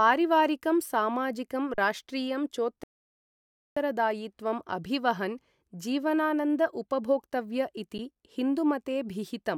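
At 1.74 to 1.78 s the speech freezes for 40 ms: an underrun with held sample. The output buffer emptied and the converter held its last value, so the waveform sits flat. Roughly 40 ms of audio is lost. From 2.84 to 3.77 s a rebuffering stall drops the sound to silence for 930 ms while the player waits for more data. It then resumes exactly where it stopped, so no audio is lost but nearly a second is added. At 7.98 s a second, briefer underrun holds the signal flat for 10 ms, skipping about that much audio.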